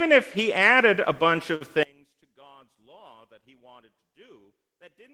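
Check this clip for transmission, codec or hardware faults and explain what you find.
Two faults stand out: a brief stall early on, then a collapse in level that lasts to the end.

Short stall from a late packet, 1.55 to 1.63 s: the sound hangs on one moment for a fraction too long, with a faint buzzy smear, then resumes exactly where it left off. A packet arrived after its due time, the jitter buffer ran dry, and the receiver stretched the last audio by about 52 ms to bridge the gap. Nothing is lost, but playback falls 52 ms further behind.

One channel inverted, from 1.83 s to the end: the sound suddenly drops by about 31 dB, leaving only a faint residue. This is the cancellation you get when a stereo pair is summed to mono with one side's polarity reversed. Anything common to both channels cancels, and only their small difference survives. A flipped channel is the likely cause.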